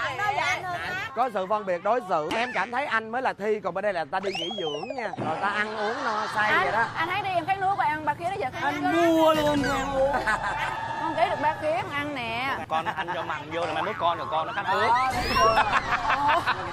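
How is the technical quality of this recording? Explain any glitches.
No glitches or faults are audible.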